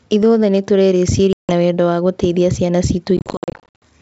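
Packet loss on an ADPCM call leaves a hard 160 ms silence at 1.33 s, then scattered gaps of up to 60 ms from 3.17 to 3.83 s. The desynchronised decoder brings the speech back slightly distorted.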